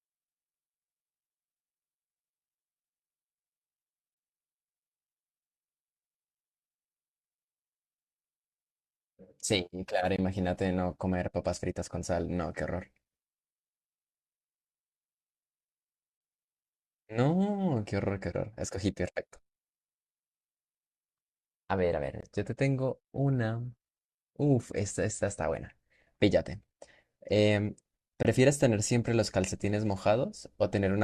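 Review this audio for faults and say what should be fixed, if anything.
Three gaps between chunks interrupt the speech at 10.16–10.18 s, 22.21–22.23 s and 28.23–28.25 s. Each is a hole of about 21 ms at a join between 6-second chunks, likely from codec padding or late chunk starts. Strip the codec padding and schedule each chunk to start exactly when the previous one ends.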